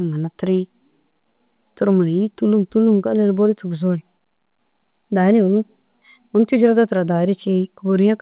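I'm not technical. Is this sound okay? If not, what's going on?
Yes, this speech clip sounds fine; nothing stood out as a problem on listening, and the narrow, phone-like tone is just how this kind of internet call sounds.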